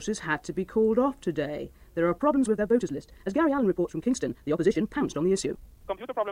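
From 2.16 s to the end at 6.31 s the sound abruptly runs faster, about 1.78 times its earlier pace, with no change in pitch. It turns rushed. This time-stretched section was most likely squeezed by software that kept the pitch by dropping short pieces. On a waveform the envelopes after 2.16 s look compressed and crowded. On a spectrogram the harmonic bands stay at the same heights, while the events crowd closer together in time and their edges show small seams.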